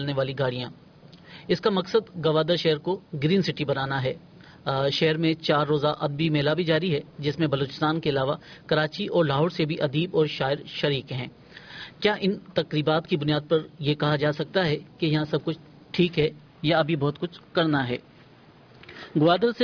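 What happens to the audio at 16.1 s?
Nothing goes wrong at 16.1 s; the audio runs straight through that moment without any dropout, click or distortion.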